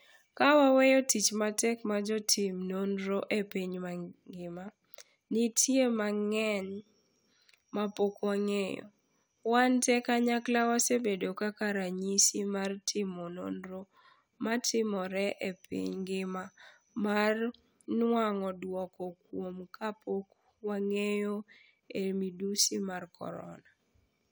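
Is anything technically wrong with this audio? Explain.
No, nothing stood out as technically wrong on listening to this speech recording.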